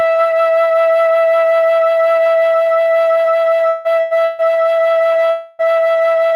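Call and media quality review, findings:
Call audio freeze at 3.69–3.87, 4.01–4.13, 4.25–4.41 and 5.31–5.61 s. The sound is held as a fading buzz for 155, 100, 139 and 281 ms, then resumes intact but later. The likely cause is jitter-buffer underrun from delayed packets. On a spectrogram these show as smeared horizontal bands, with no hard cut to silence.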